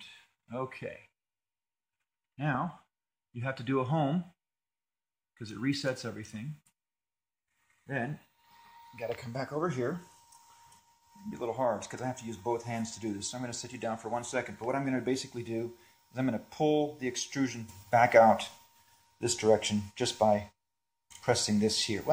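A sudden gain jump arrives at 17.69 s: the level steps up by about 8 dB in an instant and holds at that higher level through to the end of the clip. The sound and its background noise rise together, so the floor lifts along with everything else. The likely cause is a digital gain change applied from one sample to the next, such as a setting or bit shift taking effect with no ramp to smooth the transition.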